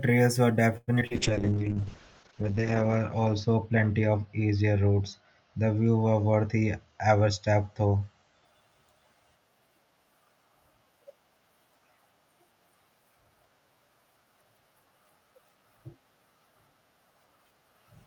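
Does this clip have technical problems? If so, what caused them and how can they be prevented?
Yes. From 0.77 to 1.12 s there is repeated packet loss with a robotic sound. Four gaps fall close together, the longest about 100 ms. The receiver fills each one by extending the last sound, so nearly half of that stretch is patched rather than real, and the speech turns choppy. On a spectrogram the concealed pieces appear as smeared, repeated harmonic bands. The waveform shows copied cycles and abrupt joins. Stable routing, forward error correction and a wired or stronger network link would prevent it.

A call bitrate drop follows from 1.12 to 8.51 s. The rate falls from 64 kbps to 7 kbps and stays at its lowest for 1.5 s. At that rate the encoder quantises coarsely and cuts the audio bandwidth from 20 kHz to 8 kHz, so the speech sounds muffled and watery. A spectrogram shows everything above 8 kHz abruptly gone, with blurred, blotchy detail below it. 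More reliable bandwidth, or a higher minimum bitrate setting, would avoid this.

A jitter buffer slow-down runs from 1.33 to 1.82 s. The buffer was short of audio, so the receiver repeated single pitch periods many times and added 67 ms. Speech plays at about 88% speed without any change in pitch, with drawn-out syllables. On a spectrogram the harmonics keep their spacing but stretch in time. The waveform shows repeated, near-identical cycles. Steadier packet delivery, or a larger fixed buffer, would prevent it.

A jitter buffer speed-up appears from 6.37 to 7.30 s. The buffer held more audio than it aims for. The receiver trimmed short pitch-period pieces, about a tenth of a second in total, so speech runs at about 110% speed at the same pitch and sounds hurried. Spectrogram features appear time-compressed, and the waveform shows missing cycles at the splices. Reducing network jitter bursts would prevent it.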